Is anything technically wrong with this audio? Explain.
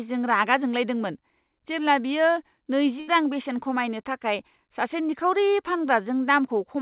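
Yes, there is a burst of packet loss from 3.0 to 3.11 s. Consecutive packets were lost, so the receiver extended and faded the last sound for about 76 ms, then resumed with about 80 ms of speech skipped. The G.711 mu-law call path accounts for the band limit at 4 kHz.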